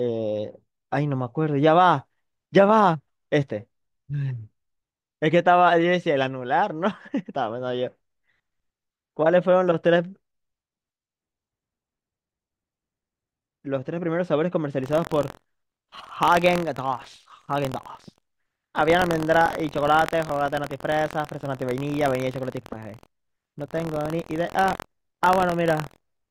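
From 14.81 s to the end at 26.30 s, the speech takes on a steady robotic rattle at about 43.1 Hz, present only while sound is playing. This is buffer tearing. The software filling the ring buffer and the hardware draining it have drifted out of step and now cross inside each period. A small slice of every buffer replays audio from roughly a tenth of a second earlier, with an abrupt join at each edge. The rate fits a 1024-sample buffer.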